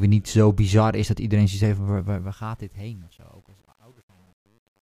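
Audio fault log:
1.97–4.91 s, truncation distortion on a fade: after "dat iedereen zoiets heeft" the fade-out turns gritty, worst from 2.62 s, as a 9-bit stage without dither steps the waveform.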